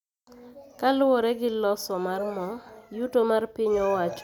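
Listening to this speech recording, nothing stood out as a technical problem.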